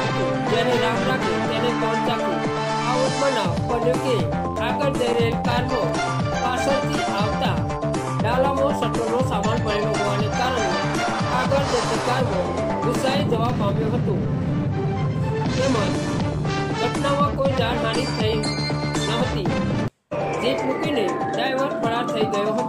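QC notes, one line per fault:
4.56 to 5.89 s, CD scratch ticks: eight short ticks at roughly six a second, each just a few milliseconds. A scratch is wiping out more data than error correction can rebuild on every disc turn, so the player patches or mutes those samples.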